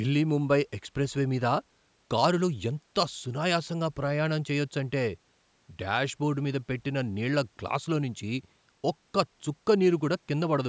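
There are no technical faults to describe in this speech, which has only been through the normal processing of a call microphone.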